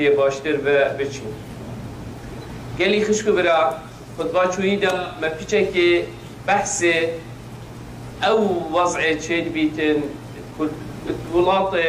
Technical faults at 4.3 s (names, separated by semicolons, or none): none